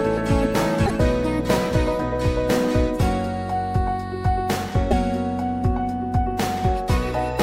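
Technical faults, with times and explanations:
0.85–0.91 s and 4.90–4.92 s, broken MP3 bit reservoir: at both spots the sound lurches forward with a short glitch, about 55 ms the first time and about 24 ms the second. That's likely frames having gone missing. The next frame reaches back into the reservoir for borrowed bits, finds another frame's bytes, and decodes garbage for a frame or two. The lengths fit roughly 26 ms MP3 frames.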